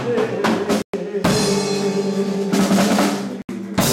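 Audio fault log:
0.82–0.94 s and 3.42–3.49 s, Bluetooth dropout: the sound cuts to silence twice, for about 116 ms and then about 70 ms. When it comes back it has moved on, as if it kept playing underneath. That's most likely wireless packets arriving too late for the headphones and getting thrown away, a handful each time judging by the gap lengths, so the output just goes quiet until good data turns up again.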